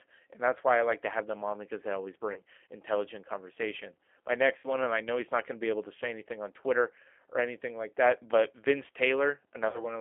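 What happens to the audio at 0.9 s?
At 0.9 s the speech carries G.729 codec damage, present throughout the clip: rebuilt from a vocal tract filter, pitch predictor and sparse pulses, it sounds rough and synthetic, fitting 8 kbit/s. A plain telephone band-limit (250 Hz to 3.4 kHz) would sound muffled but not grainy.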